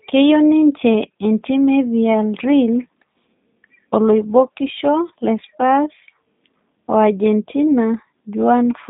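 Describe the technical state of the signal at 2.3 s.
G.729 codec damage is present at 2.3 s, as it is across the whole clip. The speech has been rebuilt from a vocal tract filter, a pitch predictor and a few pulses per 10 ms frame rather than carried as a waveform, which fits an 8 kbit/s G.729A link. The band runs from about 150 Hz to 3.7 kHz with nothing above, so the speech sounds narrow, slightly rough and plainly synthetic.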